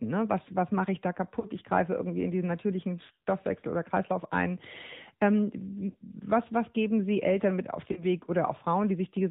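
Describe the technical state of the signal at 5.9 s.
Lost AMR speech frames occur from 5.90 to 5.97 s, a 70 ms stretch containing the missing speech data. About 40 ms of that gap matches two missing 20 ms frames that failed their checksum. The decoder covers the hole by repeating the last good pitch and vocal-tract settings while lowering the gain, so the sound briefly smears into a held, warbling dip before real audio resumes.

The AMR narrowband mobile codec shapes the signal underneath that gap and across the whole clip. The audio has been squeezed through the 8 kHz-sampled mobile speech model, so nothing above 4 kHz survives, and the speech sounds plainly buzzy and synthetic. That level of damage suggests one of the mid-rate modes, roughly 10.2 kbps, where a few excitation pulses per subframe stand in for the real waveform.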